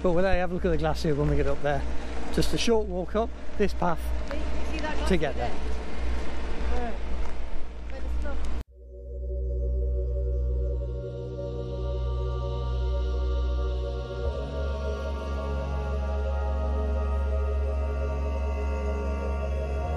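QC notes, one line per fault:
0.33–0.42 s phantom power thump: a supply step passing through the input coupling capacitors gives a deep low-frequency bump peaking at about −13 dBFS and dying within 20 ms, unlike a plosive's breathy onset.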